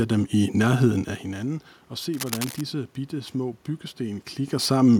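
Cable scratch noise runs from 2.14 to 2.62 s, between "nærheden af hinanden og" and "bitte små": dense, uneven scratching sits just under the speech level. It likely comes from a worn cable or connector being moved, its contact resistance flickering rapidly.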